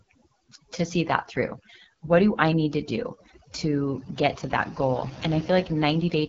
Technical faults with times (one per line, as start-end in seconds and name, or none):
0.00-6.29 overdone noise removal
0.00-6.29 AMR wideband (HD Voice) codec